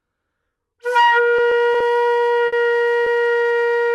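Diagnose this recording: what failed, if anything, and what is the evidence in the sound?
Repeated stalls (stutter) occur at the network and jitter-buffer stage, between 1.37 and 1.82 s. The sound catches and drags four times in that span. About 50 ms in total is filled in, with the longest hold near 20 ms, roughly 11% of the stretch. Packets arrived late or too slowly, so the buffer kept running dry and the receiver extended the last sound each time. Nothing is lost; the timing simply hitches.

Two short stalls from a late packet, also at the jitter buffer, fall at 2.46 to 2.54 s and 3.04 to 3.08 s. In each, the sound holds unnaturally with a faint buzz or dip: about 60 ms of fill in the first and 20 ms in the second, matching delay jumps of 60 and 20 ms. Each time one packet missed its slot, the receiver stretched the preceding audio until it arrived, then resumed from the same point with no content missing.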